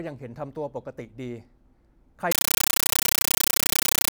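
From 2.32 s to the end of the clip at 4.12 s, the speech is replaced by very loud, harsh static that chatters at 31.25 bursts per second, each burst about 9.3 ms of noise followed by silence. This is a compressed stream played as audio. An AC-3 (Dolby Digital) bitstream reached the output as if it were ordinary samples instead of being decoded. Each coded frame comes out as a noise burst, and its zero padding as the gap. A 9.3 ms burst fits a 448 kbps stream.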